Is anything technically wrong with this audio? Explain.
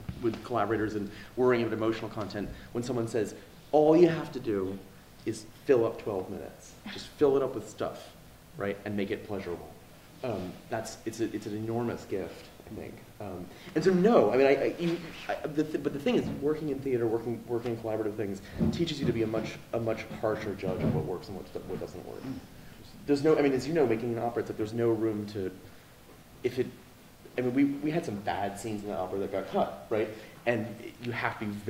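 No, nothing is technically wrong with this audio.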